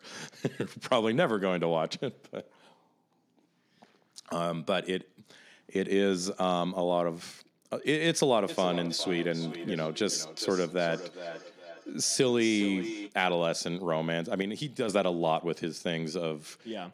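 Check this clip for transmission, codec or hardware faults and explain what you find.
Two faults turn up. From 8.48 to 13.17 s there's feedback echo between two devices: the speech comes round again roughly every 0.4 s, peaking about 11 dB below the direct speech. Two devices on the call share a room, and each canceller only removes its own playback.

From 14.42 to 14.88 s there's a sudden gain jump: speech and background noise drop about 5 dB at once, likely a gain change applied without a ramp.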